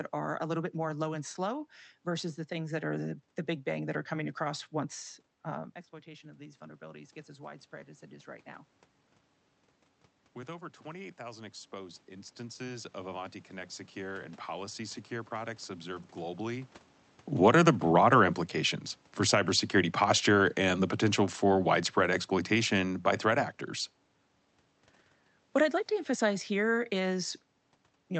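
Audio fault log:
5.50–7.23 s and 10.83–16.74 s, automatic gain rising: the gain control judged the input too quiet and slowly raised its gain, about 4 dB after the talker moved back and the level fell by about 16 dB, then about 8 dB over nearly six seconds, so voice and room noise swell together.
19.19–23.54 s, automatic gain falling: after the talker moved around 17 s, the control found the input too loud and eased its gain down by about 5 dB over four seconds, so the voice starts loud and then sinks along with its background.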